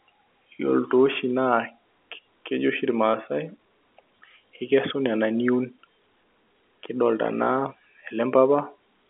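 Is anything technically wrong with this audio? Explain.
No, nothing's wrong here: it's speech carried over ordinary G.711 telephone coding, so it has the usual narrow phone-line band of roughly 250 Hz to 3.5 kHz with nothing above about 3.8 kHz, and that's just how a landline call is meant to sound.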